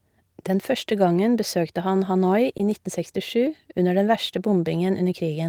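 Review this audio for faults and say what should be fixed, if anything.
A brief smear or wobble in the speech from 2.57 to 2.61 s is short concealed packet loss: about 20 ms of audio arrived too late, so the receiver extended the preceding sound to fill the gap before blending back. A larger jitter buffer or forward error correction would prevent it.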